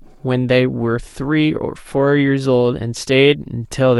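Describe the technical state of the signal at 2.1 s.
At 2.1 s the speech signal is intact, with no audible technical fault at that moment.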